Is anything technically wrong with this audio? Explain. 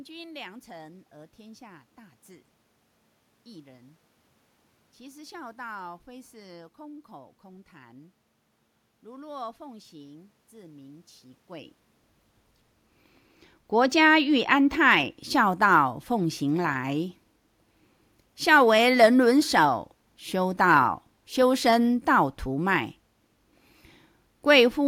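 Yes. Channel delay (comb filtering) from 12.55 to 14.91 s: one channel lags by a tiny amount, about two samples, and the mono sum cancels treble around 10 kHz, dulling the speech.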